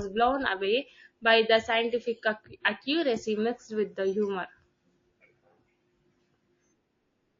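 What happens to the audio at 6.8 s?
At 6.8 s you're hearing the same damage that runs through the whole clip, and it's most likely MP3 compression at a low bitrate, something in the region of 32 kbps. With so few bits, the encoder chops off the treble and drops quieter frequency detail that flickers in and out between frames. So the speech sounds watery and a bit swirly, with metallic chirps on s sounds and smeared, soft-edged onsets.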